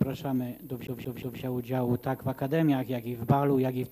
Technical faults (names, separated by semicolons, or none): CD stuck on one turn